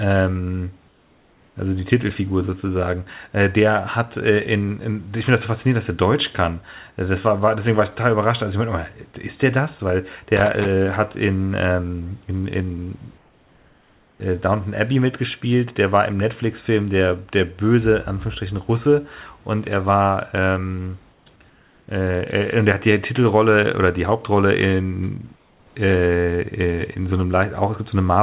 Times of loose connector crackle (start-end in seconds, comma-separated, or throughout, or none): 10.37-10.66